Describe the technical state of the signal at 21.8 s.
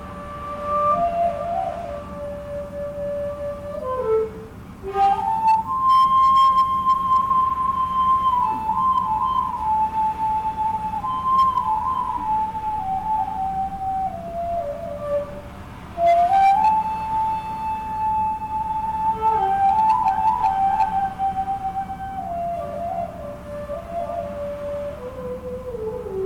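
At 21.8 s the signal is hard clipped, as it is across the whole clip. It is driven about 4 dB past what the chain can pass, so peaks are cut flat, affecting roughly one or two percent of samples, and the added high harmonics sound as crackle on loud peaks.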